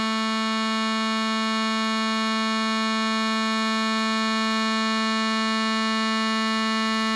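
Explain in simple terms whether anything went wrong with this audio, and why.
Something did go wrong: the music was squeezed through a low-quality setting of what is likely Dolby Digital compression, from start to finish. To save space, the encoder cut off everything above about 11.6 kHz and gave much of the remaining detail too little data, filling the gaps with noise. So the whole clip sounds dull and muffled, with a rough, fluttering haze clinging to sustained tones.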